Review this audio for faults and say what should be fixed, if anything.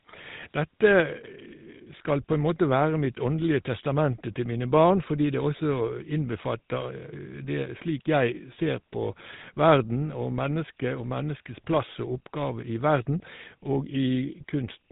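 Across the whole clip the speech carries GSM full-rate codec damage: a buzzy, gravelly roughness and nothing above 3.8 kHz. The codec models the vocal tract, then drives it from a sparse, regularly spaced pulse excitation, which fits the 13 kbit/s GSM mode. To prevent this, capture or route the audio over a wideband path instead of a GSM circuit.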